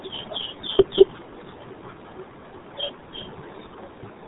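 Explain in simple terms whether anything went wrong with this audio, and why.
Yes, it's been through the RealAudio 14.4 codec, an old dial-up speech format, so the whole clip sounds muffled and gargly, with nothing above about 3.8 kHz.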